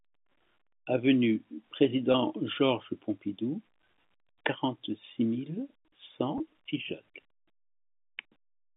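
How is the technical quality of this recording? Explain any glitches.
The recording has two brief glitches from packet loss with pitch repetition. It comes over a telephone line whose band runs from about 150 Hz to 3.6 kHz.

At 2.12 to 2.14 s, and again at 6.38 to 6.40 s, the speech briefly holds and takes on a faint buzzy, frozen quality. In each case about 20 ms of audio went missing, which points to a single dropped packet. The receiver filled the gap by repeating the last pitch period, which produces that momentarily sustained tone before normal speech resumes.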